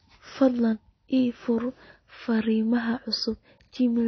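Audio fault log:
Throughout: AAC compression. The speech is dull, with nothing above 6.4 kHz, and sibilants and sustained vowels warble and smear, likely from AAC-LC at a low bitrate near 24 kbps. Unlike a plain low-pass filter, the swirling, fizzy texture shows coarse spectral quantisation.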